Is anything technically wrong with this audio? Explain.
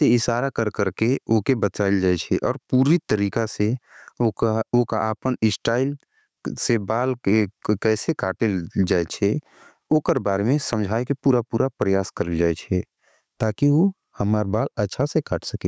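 Yes. Throughout the speech, the gain swings by around 10 dB, pulled down under each loud syllable, leaving everything squashed: gain pumping, likely from input gain set far too high with a fast limiter clamping down. The call's microphone processing, with nothing above 8 kHz, sits alongside this.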